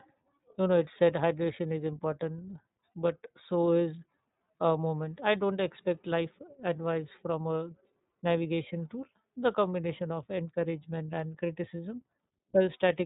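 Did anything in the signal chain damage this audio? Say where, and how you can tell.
Yes. The damage comes from the codec stage and runs through the whole clip, with the plainly audible signature of the iLBC codec. Nothing above 4 kHz survives, so the speech sounds band-limited and dull, with a rough, slightly synthetic grain. iLBC codes each frame's excitation independently rather than predicting it from the previous frame, which trades smoothness for loss robustness. The character points to 30 ms frames, which fits the 13.33 kbps mode.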